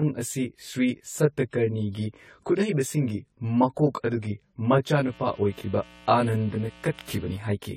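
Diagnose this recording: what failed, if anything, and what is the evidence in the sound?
Channel delay (comb filtering) at the mix or summing stage: one channel arrives roughly 20 ms late and the pair is folded to mono. Common content cancels at evenly spaced frequencies, starting around 30 Hz, giving the speech a rough, slightly doubled quality throughout.

At the codec stage, the speech sounds swirly and smeared, attacks blur, and nothing is present above 17.1 kHz. This is likely generation loss: repeated AAC-LC passes at 64 kbit/s, pointing to something like seven encodes, each re-quantising on a shifted frame grid so holes accumulate.

Mains buzz in the analogue wiring from 5.02 s to 7.37 s: a steady, raspy buzz at about 25 dB below the speech. Sharp switching spikes at twice the 60 Hz mains rate, from a dimmer, rectifier or missing shield, produce harmonics reaching several kilohertz.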